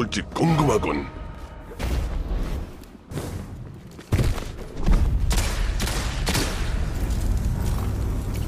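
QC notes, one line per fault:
1.35 s, 3.11 s, 5.06 s, 7.90 s: dropped buffer (overrun). Samples were likely overwritten before being read, so the audio jumps ahead. Roughly 70, 50, 20 and 20 ms vanish, with no silence.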